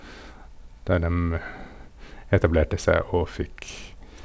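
Speech over a call path with the band ending at 8 kHz, consistent with a G.722 wideband link; no technical faults present.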